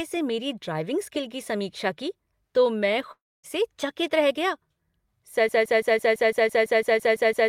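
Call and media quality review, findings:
Long network dropout, 3.11 to 3.46 s: sound smears into a fading buzz, then roughly a quarter second of silence, and about a third of a second is gone when it resumes. Likely packet loss, with the receiver stretching the last audio before giving up.

Broken-record loop, 5.49 s to the end: a 0.17 s fragment repeats back to back, about a dozen times, and never recovers. Likely a stalled player or stream resending its last buffer, so the real audio there is lost.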